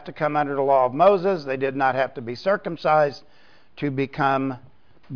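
Nothing stood out as a technical problem on listening.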